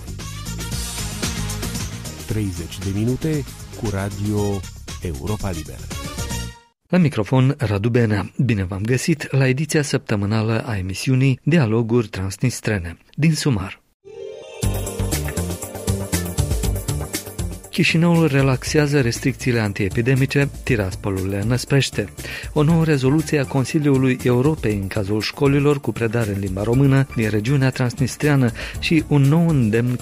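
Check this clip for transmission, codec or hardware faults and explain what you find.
One fault turns up in the clip. Damaged data in a compressed stream, from 17.99 to 18.01 s: a short stretch of the encoded bitstream arrives corrupted, so the decoder cannot read those frames as valid audio. It loses its place and hunts for the next intact frame header before decoding resumes. The result is a brief chirp, squawk, click or short hole lasting about 26 ms.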